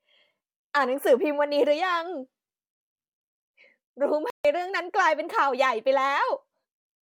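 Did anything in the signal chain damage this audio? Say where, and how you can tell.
Yes. The wireless playback link likely suffered a Bluetooth stall: interference delayed packets, the headphone buffer ran empty, and output halted until retransmissions arrived. The speech drops to silence for about 145 ms, from 4.30 to 4.45 s, then resumes abruptly.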